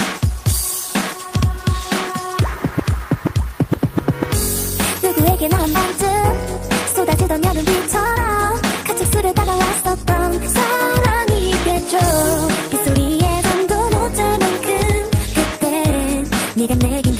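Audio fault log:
No audible faults occur at any point in this audio.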